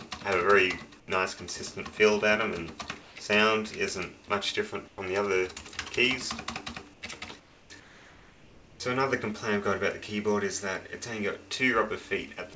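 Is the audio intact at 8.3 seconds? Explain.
No. From 7.80 to 8.80 s, the real background drops out and a smooth, featureless hiss takes its place, about 4 dB quieter than the ambience around it. That's likely comfort noise in place of the background: the sender's detector decided nothing worth sending was there, so it stopped transmitting, and the receiver filled the one-second gap with synthetic noise roughly matched to a background that sits about 26 dB below the loud parts.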